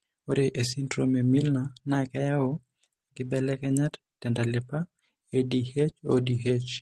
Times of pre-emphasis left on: none

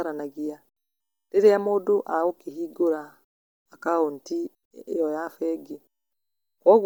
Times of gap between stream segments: none

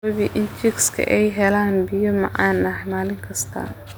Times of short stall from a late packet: none

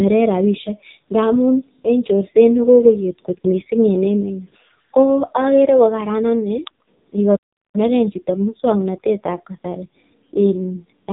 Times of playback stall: 7.36-7.75

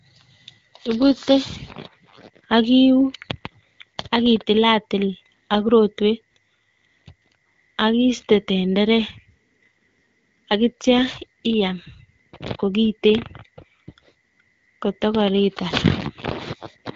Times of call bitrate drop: none

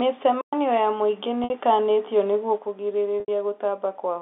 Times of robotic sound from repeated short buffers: none

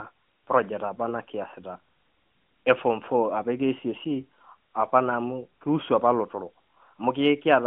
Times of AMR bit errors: 3.38-3.42

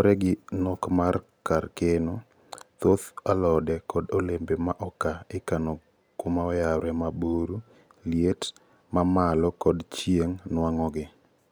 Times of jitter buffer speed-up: none

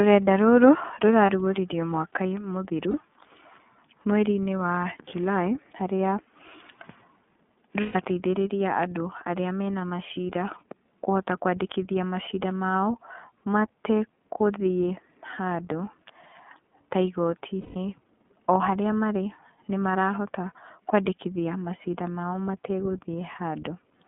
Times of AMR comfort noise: none

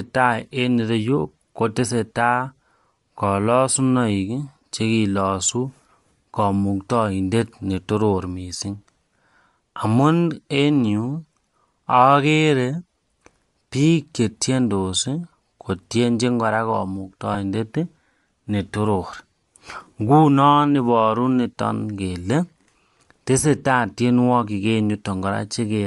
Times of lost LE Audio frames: 8.58-8.61, 17.34-17.36

